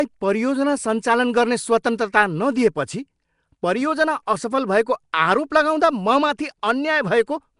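Right through the speech there's a rough, hissy halo and a smeared, underwater feel, with nothing above about 10.6 kHz. That's likely Nellymoser compression, Flash's old microphone codec, starving weak bands and filling them with noise, consistent with roughly 44 kbps.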